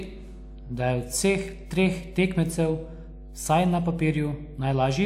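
Right from the start and all the way through, there's mains hum sitting under the speech: a steady low tone at 50 Hz, with a few low harmonics riding on it. That's the power line leaking into the signal, from a ground loop or a transformer close to the gear. It's not subtle either, roughly 15 dB below the speech, so you'll hear it as a constant drone in the pauses as well as under the talking.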